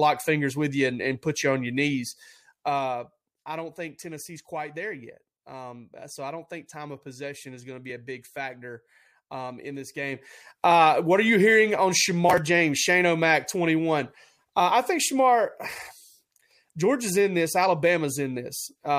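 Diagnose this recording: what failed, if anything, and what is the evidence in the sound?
Zipper noise from buffer-stage gain applied in unsmoothed steps, about ten a second. After "put you on your" (1.95–3.44 s) the level falls about 10 dB in 1 dB steps. After "factor um in this" (9.94–10.68 s) it rises about 10 dB in 2 dB steps. Each step ticks, showing as a staircase waveform envelope and faint vertical spectrogram lines.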